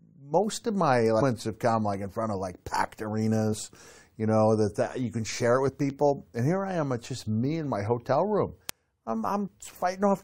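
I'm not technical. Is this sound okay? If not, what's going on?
No. Damaged data in a compressed stream garbled the file briefly, so the player stumbled and produced quick blips in the speech at 1.20 to 1.22, 3.52 to 3.54, and 5.68 to 5.70 seconds.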